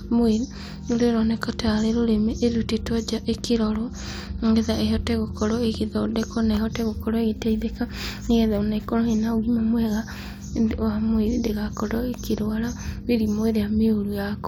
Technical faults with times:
none

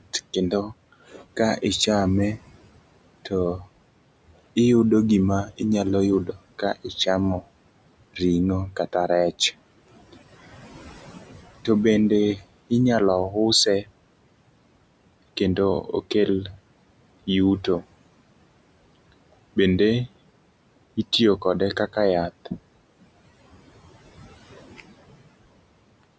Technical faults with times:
0.00-26.19 noise suppressor artifacts
0.00-10.14 speech cut by the noise suppressor
11.65-13.90 speech cut by the noise suppressor
15.81-17.85 speech cut by the noise suppressor
19.12-22.48 speech cut by the noise suppressor
24.16-25.16 speech cut by the noise suppressor

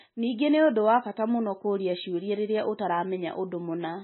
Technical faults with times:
0.00-4.04 MP3 compression

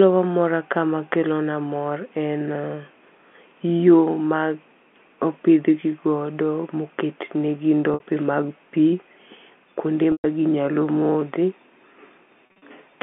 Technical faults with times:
7.94-8.00 packet loss with pitch repetition
10.12-10.24 packet loss with pitch repetition
12.46-12.62 packet loss with pitch repetition

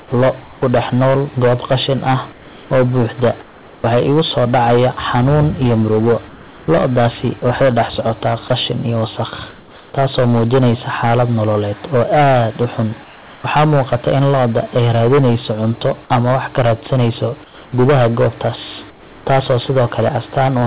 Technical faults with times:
0.00-20.66 hard clipping
0.00-0.12 sound dropped by the voice detector
0.00-0.62 comfort noise in place of the background
2.32-3.84 comfort noise in place of the background
6.28-7.42 comfort noise in place of the background
7.40 sound dropped by the voice detector
9.50-9.94 comfort noise in place of the background
13.04-13.44 comfort noise in place of the background
17.44-19.26 comfort noise in place of the background

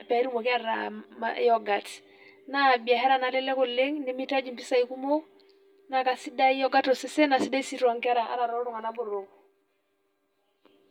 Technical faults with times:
0.00-10.90 channel delay (comb filtering)

